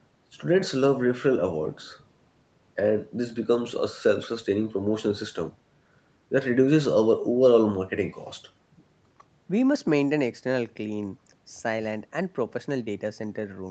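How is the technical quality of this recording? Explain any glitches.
No glitches can be heard in this speech recording.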